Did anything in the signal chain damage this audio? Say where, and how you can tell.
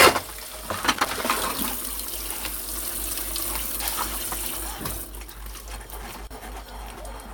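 Yes, in the analogue wiring: a worn or dirty contact in a connector was making and breaking as it shifted, producing loose connector crackle. Two irregular bursts of scratchy crackle break up the audio, from 0.93 to 1.24 s and again from 6.02 to 6.31 s, each about 0.3 s long. Each time the contact opens, the signal is chopped, and any DC on the line jumps with it, turning the interruptions into rough pops and scratching.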